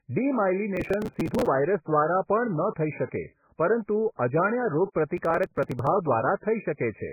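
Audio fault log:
Throughout: MP3 compression. The speech carries heavy codec damage, with nothing above about 2.5 kHz, so the top end is cut off sharply and sibilants lose their bite. Weak spectral lines drop in and out from frame to frame, giving the watery, swirling texture, and attacks smear. The depth of damage and the low ceiling fit a very low bitrate, around 10 kbps, as the likely cause.
0.76–1.47 s and 5.17–5.87 s: processor overload crackle. In each stretch the audio buffers, which fit a size of about 3 ms, miss their deadlines repeatedly, and each missed buffer is skipped outright rather than filled. Every skip is a short jump with hard edges, and the run of them reads as gritty tearing over the speech. The first burst holds far more misses, roughly seventy against about twenty, so it is denser than the second. Each burst stops when the load clears.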